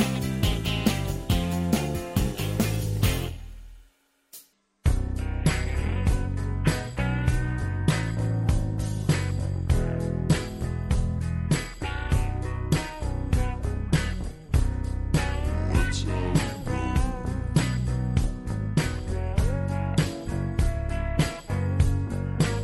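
A section at the wrong speed runs from 4.53 s to the end of the clip at 22.63 s. From that point the audio plays at 0.716 times its original rate, so everything slows to under three-quarters speed and drops about five semitones in pitch in the same instant. The sound turns deep, heavy and drawn out. The likely cause is playback or editing against the wrong clock, which stretches time and lowers pitch together rather than separately.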